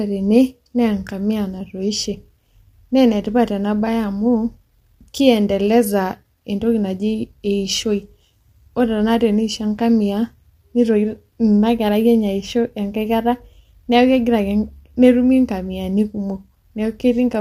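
Throughout, the speech sounds rough and grainy, with noise filling the gaps between harmonics and a thin, synthetic top band, likely from low-delay AAC compression (AAC-ELD) at around 32 kbps. Its short frames blur harmonics into grit, unlike the watery swirl of longer-frame codecs.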